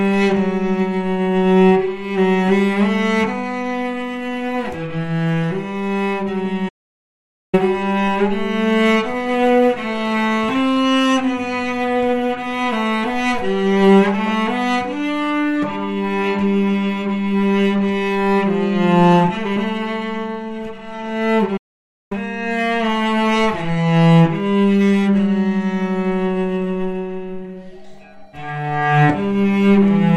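At 6.68 s the sound just drops out for about 0.84 s, then again at 21.57 s for about 0.54 s. Both are playback stalls, likely the player running dry or getting blocked before picking back up.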